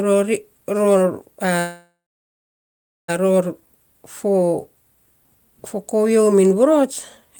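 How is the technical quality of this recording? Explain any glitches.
The recording has one clear glitch: a call audio freeze from 1.59 s to 3.10 s. The last sound is stretched into a brief fading buzz, then about 1.1 s of silence. The likely cause is packets held up in transit, leaving the jitter buffer empty until they arrived. Unlike a packet-loss dropout, nothing is cut out. The speech resumes exactly where it stopped, just about 1.5 s later than it should.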